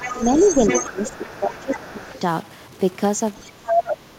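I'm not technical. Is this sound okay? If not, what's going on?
No. Three separate problems can be heard.

Throughout the whole clip there is a distorted roughness on the speech, and the quiet moments are filled with a gritty noise instead of silence. This is a stuck bit, likely caused by a faulty connection or converter. One tiny piece of the digital information that describes the sound stays fixed when it should keep changing, so the sound comes out consistently distorted.

A second voice comes through underneath: faintly from the start to 1.99 s, very briefly and quietly around 3.36 to 3.43 s, and then as loud as the main talker from 3.65 to 3.96 s. This is the other side's voice leaking through. The talker's device likely played the other person out of its loudspeaker, and the microphone picked it up again because the echo removal didn't catch all of it.

While both people talk at once, the main voice weakens or drops out in pieces. 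It dips slightly between 0.13 and 0.44 s, sinks much more noticeably for about a second within 0.73 to 2.14 s, and drops again from 3.42 to 3.84 s. This is speech suppressed in double talk. The echo removal likely couldn't tell the real talker from the echo, so it turned both down together.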